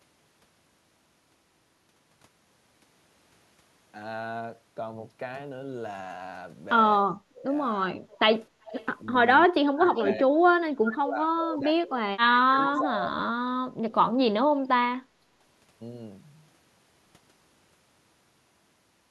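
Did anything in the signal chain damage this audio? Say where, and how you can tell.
Yes, the damage happens in call processing, in the echo canceller, and it shows up as three kinds of fault.

Speech suppressed in double talk appears at 7.01–7.5 s, 7.76–8.2 s and 9.47–13.16 s. The speech level dips by around 25 dB, then around 10 dB, then around 30 dB, with about three seconds affected in the last stretch. On a waveform the envelope caves in mid-phrase. On a spectrogram the harmonics thin out and fade in patches. The likely cause is the canceller mistaking simultaneous talk for echo and pulling everything down.

An echo leak appears at 8.11–8.19 s, 8.64–8.86 s and 9.95–10.06 s. Each is a faint copy of the speech trailing it by 376 ms, roughly 20 to 30 dB below the direct sound. A spectrogram shows ghost harmonic fragments offset by the same 0.38 s each time, and that fixed delay points to a loudspeaker path the canceller likely failed to fully subtract.

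Background gated by the echo canceller occurs at 15.09–15.19 s. The room tone drops by about 8 dB for roughly 70 ms, then recovers. On a spectrogram this appears as a brief vertical notch across the noise floor. On a waveform the low-level background briefly narrows. This is the suppressor clamping the microphone while the loudspeaker played, then releasing.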